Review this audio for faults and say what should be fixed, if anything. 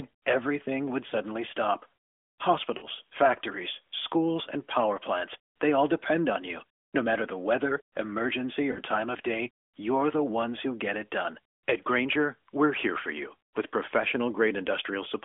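Lost AMR speech frames cause three brief smeared dips: 1.08–1.16 s after "everything would", 2.78–2.85 s before "factories schools and power", and 8.72–8.79 s. Each lasts about 40 ms, which fits two 20 ms frames concealed by repeating the last good frame at fading gain. A stronger radio link or better channel error protection would prevent them.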